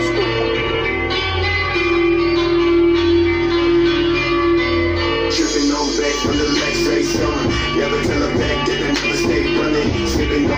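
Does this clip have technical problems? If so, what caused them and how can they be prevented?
Yes. An adaptive stream starting at a low bitrate affects 0 to 2.0 s: the player began on a cheap version to start fast, so the sound is dull with heavier codec artefacts, then abruptly sharpens without a gap, consistent with Opus stepping from 24 to 64 kbit/s. To prevent it, start at a higher bitrate when the connection is known or buffer briefly before playback.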